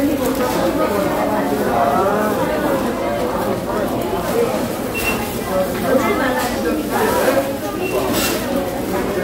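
Nothing here gives me any trouble: it's a short run of sounds, and I can't hear any technical fault anywhere in it.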